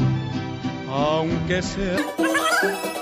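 From 1.98 s to the end at 3.01 s, a wrong sample rate makes the sound run three times fast and about 19 semitones high, which fits 16 kHz material played at 48 kHz. On a spectrogram, features are squeezed in time and stretched threefold upward in frequency.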